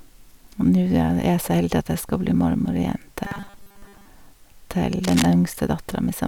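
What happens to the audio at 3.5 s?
At 3.5 s you're inside a stretch of robotic sound from repeated short buffers, running from 3.24 to 4.05 s. Most of the audio there is likely a 5 ms chunk replayed over and over, forcing a fixed 200 Hz buzz, so the speech goes rigid and metallic.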